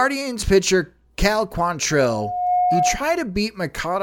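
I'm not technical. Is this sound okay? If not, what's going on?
No, there's loudspeaker feedback squeal from 1.90 to 3.10 s: the mic hears its own speaker, and a 722 Hz tone swells for under a second, ending up louder than the speech.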